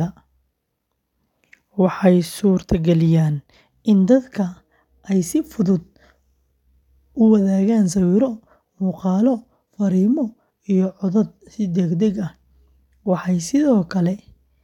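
No technical faults can be heard anywhere in this recording.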